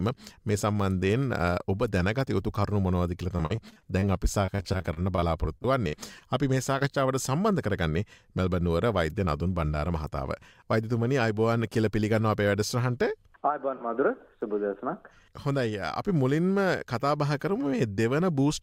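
From 3.37 to 6.23 s the sound turns choppy: repeated packet loss, with 23 separate gaps, the longest 47 ms. Each hole is bridged by extending the last sound, and about 17% of the stretch is patched this way. The next hole arrives before the audio recovers, so the result is sustained choppiness rather than the isolated glitch of a single dropout.

At 6.79 s there is short concealed packet loss: a single 20 ms hole filled by continuing the preceding sound and then blending back. It is a lone brief smear or wobble, without the rhythmic choppiness of the earlier run.

Between 8.85 and 9.27 s a jitter buffer speed-up plays the audio at 107% speed. Pitch-period-sized slices, around 40 ms in all, are cut to reduce buffered delay, so the sound briefly hurries at unchanged pitch. There is no smearing or metallic fill, which sets it apart from packet-loss concealment.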